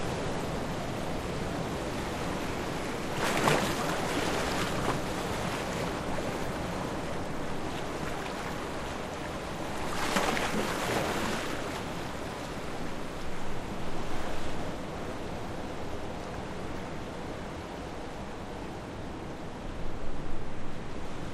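No technical faults can be heard anywhere in this recording of sounds; the signal stays intact throughout.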